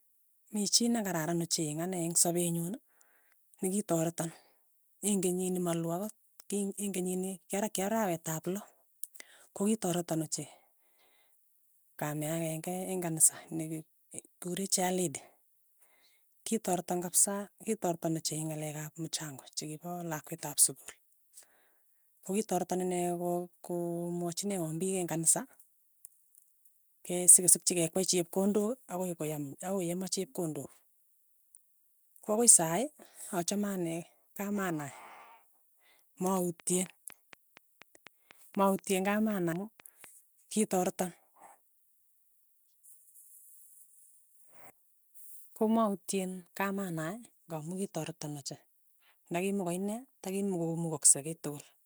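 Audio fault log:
36.37–40.05 s, train of clicks: regular ticking at 4.08 per second, about fifteen sharp vertical spikes, likely from electrical interference or a faulty connection, standing above speech.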